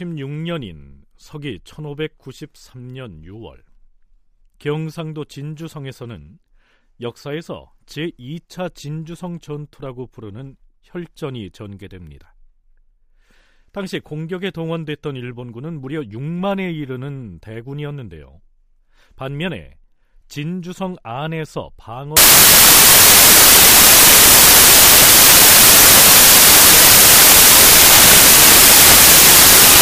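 A byte-alignment error in the sample reader takes hold at 22.17 s and lasts to the end of the clip, at about 29.8 s: samples built from the wrong bytes. Each value is assembled from mismatched or misordered bytes, so the rapidly fluctuating low-order bits land in the most significant position. The speech is replaced by loud, harsh broadband noise, close to white on the louder sounds.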